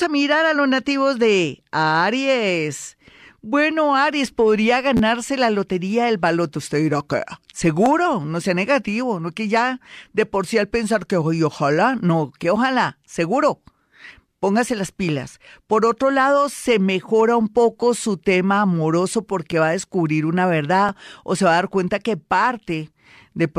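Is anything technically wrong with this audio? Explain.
Yes. A repeated buffer occurs at 4.97 to 5.00 s, just before "la lotería del baloto," and again at 7.86, 12.43, 19.52 and 20.89 s. Audio arrived late, so the device replayed its last block of about 12 ms, which fits a 512-sample buffer. Each repeat sounds like a click or brief buzz in the speech. The first is longer because the block plays three extra times.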